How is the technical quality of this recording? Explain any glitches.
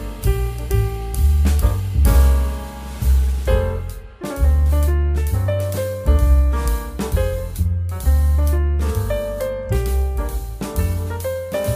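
No technical faults are audible.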